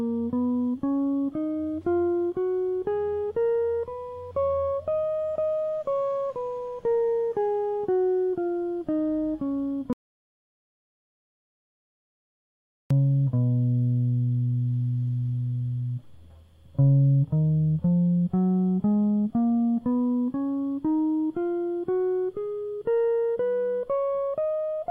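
At 9.93 s the music drops out to silence until 12.91 s. The input was likely lost, leaving a total three-second gap, with no room tone.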